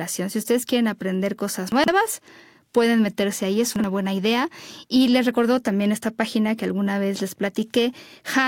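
Chunks out of order at 1.72 to 1.88 s and again at 3.76 to 3.84 s: a 40 ms chunk of speech plays three chunks late, then one chunk late, so nothing is lost but the sequence scrambles, giving brief jumbled syllables with hard joins.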